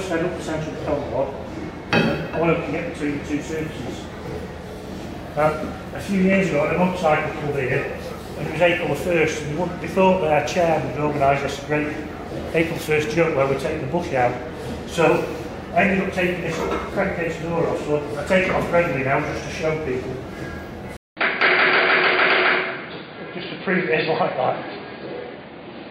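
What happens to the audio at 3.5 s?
Nothing goes wrong at 3.5 s: the audio there plays through intact, with no dropout, click, glitch or other audible fault.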